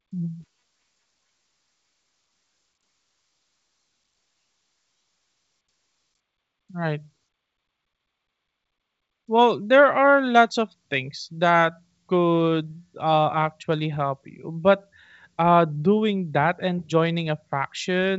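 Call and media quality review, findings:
No findings in this call and media quality review; the G.722 wideband speech path is working as expected.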